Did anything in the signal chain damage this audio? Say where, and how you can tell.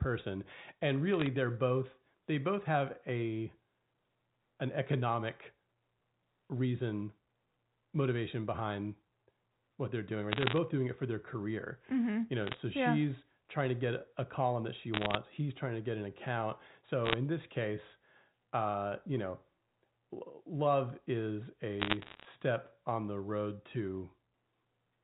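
Yes. Bit errors on a digital phone line appear as bursts of sharp ticks and crackle at 1.14–1.27 s (before "they're both they both"), 10.32–10.58 s, 12.42–12.57 s, 14.94–15.16 s (after "a column that she"), 17.06–17.14 s and 21.8–22.26 s (between "love is" and "on the road"). This is a transmission-stage fault on the G.711 line. Under one percent of bits flipped, and each flip corrupts a single logarithmic sample, so hits on sign or high bits click over unchanged speech.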